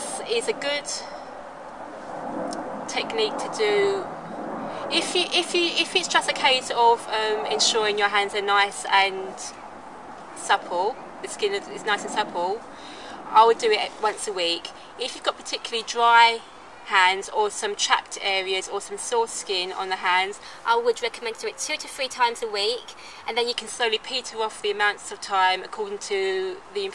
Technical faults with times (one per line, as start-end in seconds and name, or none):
20.45-23.53 wrong sample rate